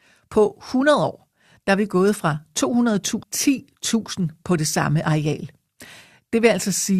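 A speech recording with one abrupt discontinuity at 3.22 s: the sound jumps forward with a brief blip, as though part of the speech has been cut out and the next section spliced straight on. This is a stream segment skipped, and it is likely caused by one chunk of a segmented stream failing to load, so the player dropped that piece and carried on from the following segment.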